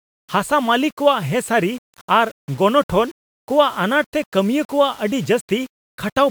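No faults to report; the speech sits on an 8-bit path working as intended, with the grain that bit depth brings beneath the quietest passages.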